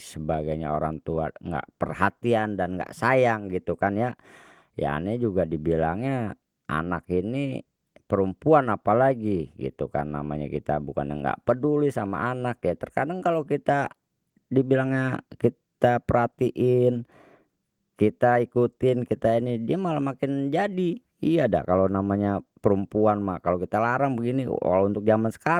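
Nothing here stands out as a technical fault; the speech sits comfortably within Opus voice compression running in its hybrid fullband mode, much as you'd expect from a stream at around 24 kbps.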